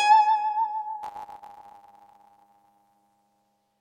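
At 1.02 s the music picks up a steady buzz that lasts to the end of the clip. This is a block size mismatch, truncated type. One stage hands over longer blocks than the next stage takes in, so the tail of each block is dropped. The cut repeats 100 times a second, which gives the 100 Hz buzz. With part of every block gone, the music runs about 1.09 times fast, yet its timbre stays.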